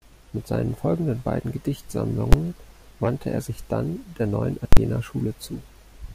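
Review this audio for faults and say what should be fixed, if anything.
Invalid numbers at full scale produce a single bang at 2.33 s (an 11 ms block, fitting 512 samples) and, at 4.73 to 4.77 s, loud pops at both edges with silence between. Infinite or invalid results clamped to maximum: flat rails at one extreme value, far beyond the speech peaks, on the waveform, bright broadband vertical lines on the spectrogram. To prevent it, check each processing block for infinite or invalid values and replace them with silence before output.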